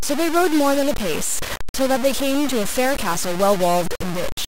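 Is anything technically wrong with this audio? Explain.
Yes. The speech carries grainy distortion from start to finish, likely from low bit depth without dither: truncation to about 4 bits leaves signal-following error roughly 10 dB down, gritty in quiet passages. The waveform shows visible staircase steps, and the spectrogram shows broadband hash that tracks the speech.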